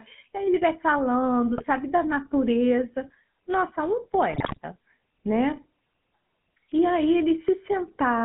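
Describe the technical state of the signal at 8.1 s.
At 8.1 s the speech sounds buzzy and gravelly, squeezed into a band of about 150 Hz to 3.4 kHz, as it does throughout the clip. This is GSM full-rate codec damage: a modelled vocal tract driven by sparse, regular pulses, which fits a 13 kbit/s coder.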